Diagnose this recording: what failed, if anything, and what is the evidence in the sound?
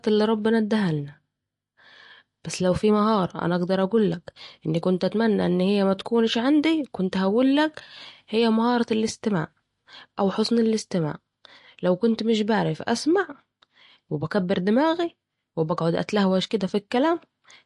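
The codec stage is the likely culprit: a low-bitrate MP3 encode, with damage that points to something around 48 kbps, has starved the speech of bits throughout. The encoder has cut the top off at about 11.3 kHz, leaving nothing above it, so s sounds lose their edge. With too few bits to go round, weak frequency lines drop in and out from frame to frame, giving a plainly audible watery swirl and smeared consonant onsets.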